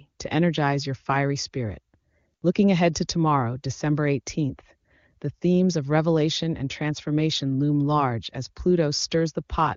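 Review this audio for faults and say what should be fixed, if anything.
No faults; nothing to fix.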